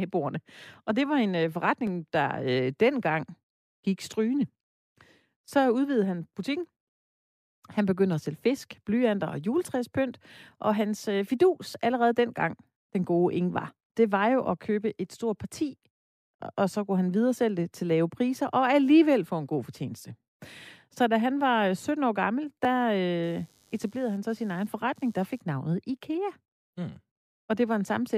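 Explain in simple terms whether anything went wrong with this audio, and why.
From 23.23 to 25.41 s there's computer activity noise, a faint rapid buzz from the computer's workload disturbing the audio's shared ground.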